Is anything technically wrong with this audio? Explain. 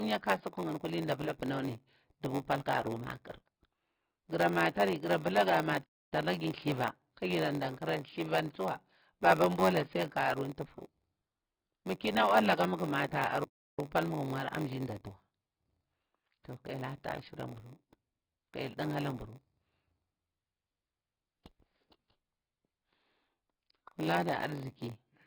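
Yes, three kinds of fault are audible in this speech clip.

AAC compression runs throughout: the speech sounds dull and smeared, with a fizzy, warbling texture on sibilants. That heavy damage likely comes from low-rate AAC-LC, around 16 kbps. Unlike plain low-pass filtering, it adds swirling artefacts along with the lost top end.

A block size mismatch (padded) also runs throughout. A steady buzz at about 93.8 Hz sits under everything, which fits a stage reading 512-sample blocks that arrive short and are filled out with zeros. The speech runs at 0.938 times normal speed while its pitch stays about normal, which separates this from a sample-rate error.

Two playback stalls cut the sound off mid-flow: from 5.83 to 6.13 s, with roughly 271 ms of silence, and from 13.44 to 13.79 s, with roughly 323 ms. The speech then resumes, which points to a player that likely ran out of data.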